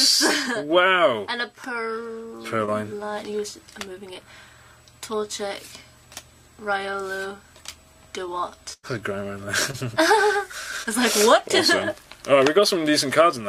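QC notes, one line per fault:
2.65–2.69 s, 4.13–4.17 s, 9.71–9.75 s, 10.83–10.87 s: short concealed packet loss. Each time 20 ms of audio went missing, and the receiver extended the preceding sound for 13 to 25 ms before blending back, causing a brief smear.
8.73–8.85 s: burst of packet loss. 100 ms of audio is missing. The receiver filled 99 ms by continuing the last sound while fading it down, then resumed further on.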